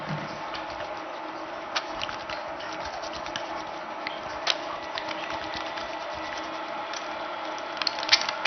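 A recording of everyday sounds, dull throughout with a gurgling, granular roughness, likely from heavy MP2 compression at a low bitrate, around 48 kbps. A spectrogram shows nothing above about 6.2 kHz, with upper sub-bands flickering on and off as blocky patches.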